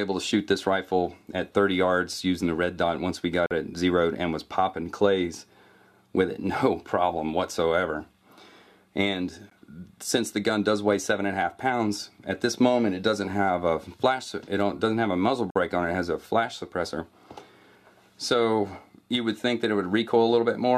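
The audio drops out three times into hard-edged silence: from 3.46 to 3.51 s (about 46 ms), at 9.50 s (about 15 ms), and from 15.50 to 15.56 s (about 50 ms). The holes fall roughly 6 s apart, which fits 6-second stream segments. This is a gap between stream segments: the time stamps of neighbouring segments leave a small space, and the player pads it with silence. Nothing is lost; the sound resumes where it left off.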